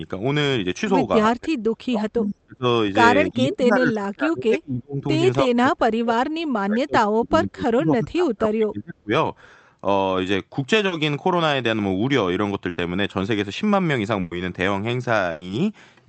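Between 1.29 and 2.65 s, 3.29 and 5.05 s, 5.43 and 6.24 s, and 6.64 and 9.11 s, the speech keeps ducking, sometimes by about 35 dB, for roughly 0.7 to 2 seconds in each span. This is speech suppressed in double talk, likely caused by the echo canceller mistaking the talker for loudspeaker echo while both sides spoke.

At 10.87 to 10.93 s there is a short concealed packet loss: 40 ms never arrived, and the decoder extended the preceding sound to cover it. The result is a brief smear or wobble rather than a gap, and the speech carries on without losing its place.

Bursts of packet loss follow at 12.69 to 12.79 s (80 ms filled) and at 14.21 to 14.33 s and 15.31 to 15.43 s (100 ms each). They are longer than the earlier smear. Each gap becomes a held buzz or a fading hiss, and the speech resumes further along with that stretch missing. All of this comes through an Opus call path limited to about 8 kHz of bandwidth.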